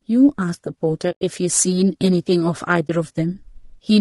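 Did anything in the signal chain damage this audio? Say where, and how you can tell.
Yes. At the codec stage, the speech is rough and grainy throughout, with noise filling between the harmonics and a thin, synthetic-sounding top band. That points to low-delay AAC compression, likely AAC-ELD at around 32 kbps, where short frames resolve pitch poorly and starve the coding.

At the network or transport stage, AAC frame loss with muting leaves soft-edged dropouts from 1.11 to 1.22 s, a hole of 100 ms, and from 2.87 to 2.90 s, a 20 ms loss that fits a single frame. The decoder zeroed the missing spectra, so the overlapping windows fade out and back in.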